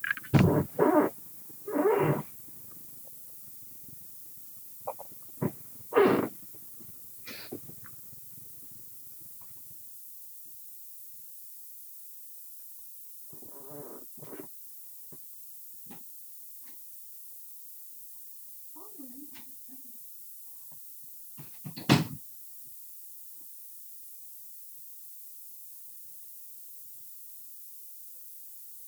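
From start to end, a steady, thin hiss rides under the sound, rising toward the top of the band. This is low bit depth with noise shaping, which fits an 8-bit signal. Rounding error is pushed upward in frequency. It sits roughly 15 dB below the signal.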